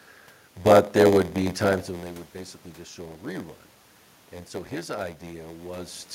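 Throughout the speech, a block size mismatch with padding is heard. One stage writes blocks shorter than the next reads, which fits a 512-sample buffer. Zeros fill each gap. This causes a steady buzz at 86.1 Hz. The speech runs at 0.938 times normal speed, with timbre unchanged. The level shift near 1.5 s sounds like the talker moving.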